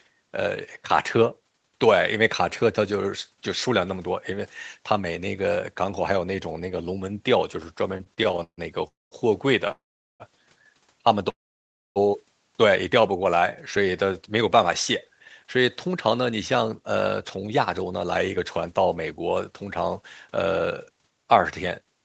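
Repeated stalls (stutter) run from 7.97 to 8.59 s. The speech halts nine times in this 0.62 s stretch, because packets were reaching the receiver late or more slowly than they were played out, so its buffer kept running dry. Each halt is bridged by prolonging the last sound, the longest for 144 ms. About 0.28 s is filled this way, nearly half the span, so nothing is lost, but the speech drags and stutters.

A call audio freeze comes at 8.87 to 9.13 s. The sound carries on briefly as a fading buzz, then drops to near silence for about 190 ms before the speech resumes exactly where it stopped. The likely cause is packets held up in transit, emptying the jitter buffer. A 240 ms gap is inserted and nothing is skipped.

A short stall from a late packet follows at 9.67 to 9.71 s. One packet missed its playout slot, so the receiver stretched the current sound by 20 ms until it arrived and then continued seamlessly. 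That leaves a slightly held sound with a faint buzz or dip.

The same freeze recurs at 9.71 to 10.22 s, now 484 ms with about 410 ms of near silence, and again at 11.30 to 11.98 s, the longest at 660 ms with about 620 ms near silent. Both sound like the first, a fading buzz into a hush, and then the speech picks up with nothing missing.

A jitter buffer slow-down occurs from 13.00 to 13.91 s. Running low on stored audio, the receiver repeated single pitch cycles and slivers of pauses to build a reserve, adding 67 ms. The speech plays at about 94% speed without any change in pitch, so sounds are drawn out.

A jitter buffer speed-up lasts from 15.13 s to the end. Holding more audio than it wanted, the receiver trimmed tiny pieces of one or a few pitch periods, again and again, removing around 0.4 s in all. The speech runs at about 106% speed at unchanged pitch and sounds slightly hurried.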